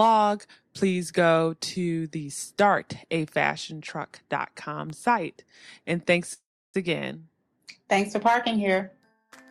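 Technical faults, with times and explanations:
6.33–6.76 s, call audio freeze: a fading buzz or hiss then 320 ms of silence, likely late packets emptying the jitter buffer; spectrogram shows a smear, then a blank gap.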